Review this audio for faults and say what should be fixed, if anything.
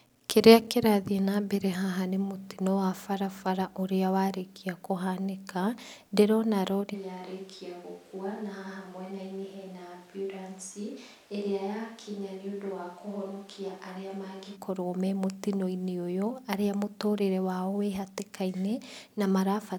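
From 6.96 s to 14.55 s the speech suddenly turns hollow and roomy, drops roughly 10 dB, and gains noticeable background noise before snapping back. This is likely a switch to a distant microphone after the close mic's signal dropped out. On a waveform, the envelope steps down abruptly at the start and back up abruptly at the end. A spectrogram shows thinner low frequencies, smeared reverberant tails and a raised noise floor between phrases. Monitor the close mic live and record a backup track from it.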